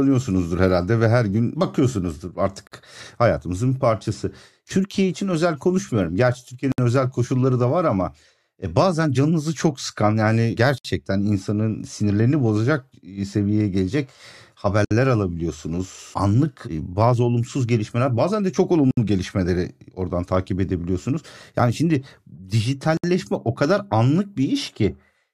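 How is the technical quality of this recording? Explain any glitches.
The speech is interrupted by six short dropouts, all gaps at a join of encoded pieces, spaced every 4 s: at 2.67 s (between "ve her gün bakıyorsunuzdur" and "hayatımızın bir parçası", 47 ms), then 6.72, 10.78 (after "canınızı çok sıkan yani"), 14.85, 18.91 and 22.97 s (before "o kadar"), each about 64 ms. The audio was encoded in separate pieces and joined without trimming each run's start-up delay and final-frame padding. Each join leaves a short hole of silence before the speech resumes. On a waveform this appears as a flat stretch with smeared edges, and on a spectrogram as a thin vertical blank band.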